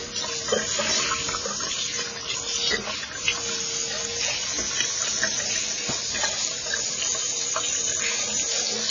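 Throughout the clip, nothing is heard above 7 kHz. The sound is dull and smeared, with a fizzy, warbling texture. The likely cause is heavy AAC compression. The damage points to AAC-LC at a low bitrate, near 16 kbps, where sparse quantisation leaves gaps.

At 1.72 s, a repeated buffer occurs. Fresh audio arrived late, so the last block played again twice more. Each repeat is about 1.45 ms, fitting a 64-sample buffer. It sounds like a brief click or buzz, and a few milliseconds of audio are lost.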